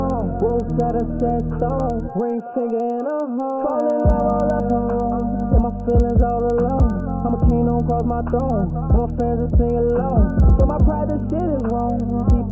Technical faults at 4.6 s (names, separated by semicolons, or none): resampler restarted on every block